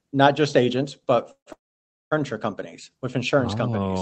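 Speech clip with two call audio freezes after "not just agents but", at 1.31–1.48 s and 1.52–2.14 s, before "companies with insurance oh": brief fading fill, then silence, likely from delayed packets draining the jitter buffer.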